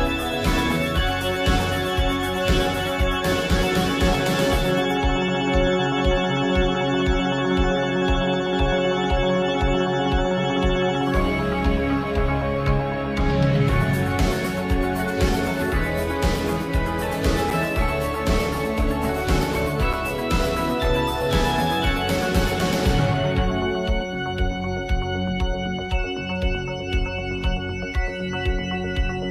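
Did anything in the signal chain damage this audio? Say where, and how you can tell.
Yes. Two brief ticks interrupt the sound, at 17.50 s and 19.93 s. Each is a hole of roughly 5.5 ms (5.69 ms and 5.42 ms) that is too short to hear as a gap. Each is a block of digital silence. The signal drops to silence and returns with no fade. This points to the driver or buffer stage, where an output buffer was not filled in time and went out empty.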